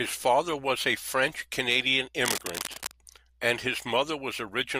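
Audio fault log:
2.23–2.93 s, cable scratch noise: a dense, uneven scratching rustle sits over the speech, only a little quieter than it, likely from a worn cable or connector being moved. On a spectrogram it shows as ragged broadband smears; the waveform gains jagged spiky bursts.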